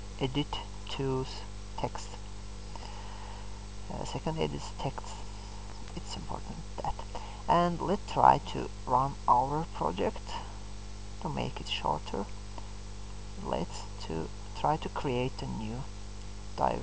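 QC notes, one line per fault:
No fault to note in this clip.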